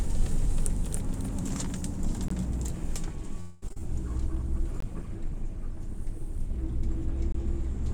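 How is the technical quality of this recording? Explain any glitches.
Not great. There are five distinct kinds of fault stacked into under eight seconds, and most of them land in the first half.

From the very start until 1.54 s there's a doubled audio track. A second full-band copy of the sound trails the original by around a third of a second, at about 5 dB lower. It's already running when the clip begins and it cuts out abruptly rather than decaying. It doesn't sound like a room reflection. The likely cause is the signal being captured twice, once through a slower path, or two out-of-step copies left in an edit.

At 2.28 s, 4.80 s and 7.32 s you get a gap between chunks. Each is a hard-edged hole of about 20 ms, spaced 2.5 s apart, which points to the audio being handled in 2.5-second blocks. Either padding is left at each join or playback of each block starts a touch late. Nothing is actually lost. 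The flow is just chopped at each join.

From 3.40 to 3.63 s there's a call audio freeze. For about 217 ms the receiver keeps extending the last bit of sound as a fading buzz or hiss instead of going silent. Then the real audio picks up exactly where it left off, so nothing is missing but everything after it runs about 217 ms late. The likely cause is packets held up in transit, leaving the jitter buffer empty.

Right after that, between 3.67 and 3.81 s, there's a little cluster of short concealed packet loss, at 3.67, 3.69 and 3.73 s. Chunks of roughly 10 to 30 ms never reached the decoder in time. The receiver patched each hole by continuing the preceding sound and blending back in, and the first patch stretched things by about 15 ms. You hear it as a quick smear and wobble over that tenth of a second.

Finally, from 4.25 s to the end there's a call bitrate drop, from 128 kbps down to 24 kbps. 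The bandwidth estimate fell and the encoder got told to spend far fewer bits, so the codec works much more coarsely. That's why the back half of the clip sounds rougher and watery compared with the start.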